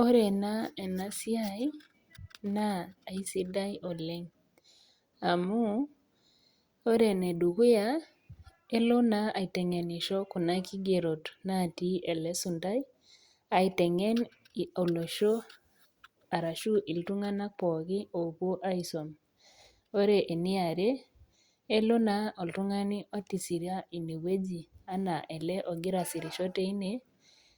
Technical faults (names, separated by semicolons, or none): none